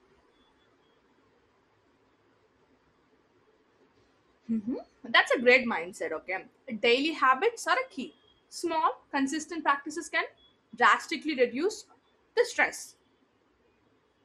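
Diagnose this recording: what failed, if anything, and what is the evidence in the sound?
Codec stage: the speech sounds dull throughout, with granular, gurgling texture as upper bands drop out, likely MP2 compression at a low rate, consistent with roughly 80 kbps.

Transmission stage: DAB burbling appears at 5.63 s, 8.59–8.74 s and 12.74–12.86 s. Short blips of noise come from uncorrected bit errors, well under a percent, corrupting samples in individual sub-bands.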